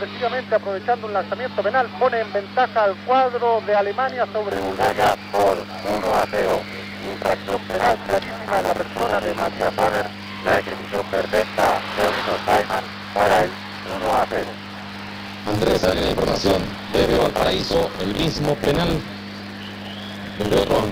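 From 4.51 s to the end, a steady 100 Hz robotic buzz rides on the sound: buffer tearing, where most of each buffer replays audio from about 40 ms earlier.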